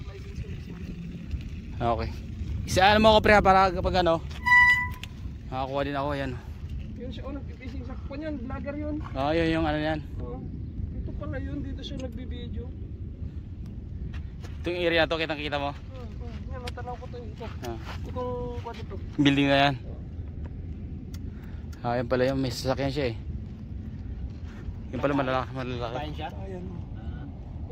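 A Bluetooth LE Audio link dropped data twice, at 19.89 s and again at 26.90 s. Each gap lasts 10 ms, which fits the loss of a single LC3 frame. These are lost LE Audio frames. The decoder filled each hole by repeating the previous frame's spectrum with randomised signs. Because the gap is so brief, there is no fade toward silence. Instead each spot carries a tiny noisy smear, a grainy blip where tonal detail briefly turns to hiss.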